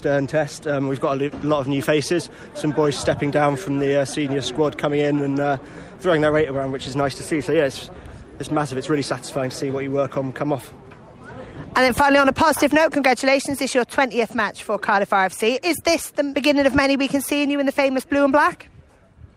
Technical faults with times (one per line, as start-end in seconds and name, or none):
none